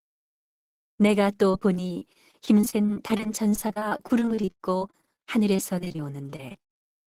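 From 1.51 to 5.20 s the speech turns choppy and robotic, where short pieces drop out and are smeared over. After a brief clean break it returns from 5.56 to 6.87 s. This is repeated packet loss (robotic sound): audio arrived missing or late again and again, and each hole, none longer than about 38 ms, was patched by stretching the preceding sound. That patching covers roughly a fifth of each stretch.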